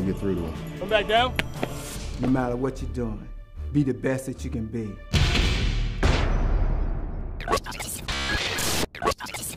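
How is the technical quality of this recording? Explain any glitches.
The recording has one glitch: Wi-Fi interference from 5.21 to 7.21 s. A Wi-Fi radio sitting close to the audio circuitry sends a beacon every 102.4 ms, and the circuit rectifies those radio bursts into the audio band. The result is a steady, evenly spaced ticking, just under ten clicks a second, lasting two seconds. It sits very faintly beneath the main sound, far quieter than the program itself.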